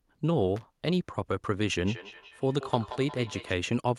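A short, irregular burst of crackle and scratching cuts through the speech from 0.56 to 0.65 s, with the signal seeming to drop in and out. That is loose connector crackle: a worn or dirty contact somewhere in the cable or plug path is making and breaking as it shifts, chopping the audio on and off and adding small pops wherever a DC offset sits on the line.

From 1.85 s to 3.56 s the speech comes back at itself as a distinct repeat, trailing each word by around a fifth of a second and peaking at about 14 dB below the direct speech. This is feedback echo between two devices: two devices in the same room are on the call, and one plays back what the other's microphone sent. That microphone picks up the playback and sends it round again, and neither echo canceller removes it, because each only cancels its own device's output.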